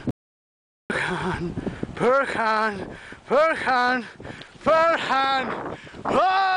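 Just after the start, the sound cuts off abruptly at 0.11 s and the track falls into dead silence, with no room tone or background hiss underneath, until it resumes mid-flow at 0.90 s. That is an audio dropout to silence lasting about 0.79 s, and whatever was happening in that stretch is simply missing. The likely cause is a momentary loss of the input signal, such as a dropped connection or brief mute, while the recorder kept writing silence.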